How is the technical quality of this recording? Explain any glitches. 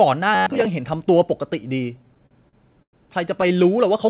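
Three glitches stand out, all in how the audio arrived rather than in the capture. Everything is band-limited to 4 kHz, which fits a narrowband telephone codec such as G.711.

From 0.35 to 0.66 s there is robotic sound from repeated short buffers. Most of that span is a rigid, metallic buzz at 93.8 Hz, likely caused by a roughly 10.7 ms chunk being replayed in place of the audio that should have been there.

From 1.98 to 2.95 s there are repeated stalls (stutter). The jitter buffer ran dry nine times, and the receiver stretched the last sound over about 239 ms in total, with the longest hold at 105 ms. Nothing is lost, but the audio drags and hitches.

From 3.41 to 3.60 s a briefer stutter occurs: four stalls of 11 ms or less, heard as stuttering.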